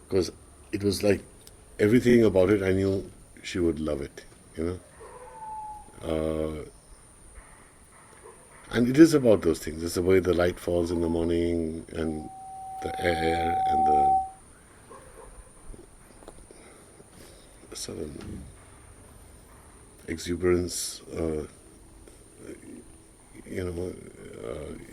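At 2.09 s the first repeated frames appear. A 30 ms block of compressed data plays twice more, adding 60 ms and producing a quick stutter. On a waveform, the same short shape repeats side by side. On a spectrogram, identical vertical slices stack up.

From 12.03 to 14.40 s a loudspeaker feedback squeal takes over. The microphone is hearing its own loudspeaker, and the loop gain at 763 Hz is above one, so that tone feeds on itself. It swells over roughly two seconds to a steady whistle about 5 dB above the rest of the sound. A spectrogram shows a single bright horizontal line brightening steadily. The waveform envelope grows into a dense, even sinusoidal band.

The repeated frames return at 18.28 s, where a 40 ms block plays twice more and adds 80 ms. At 22.69 s a 30 ms block repeats once, and at 24.19 s a 20 ms block repeats twice. Each is a brief stutter, showing on a spectrogram as duplicated slices.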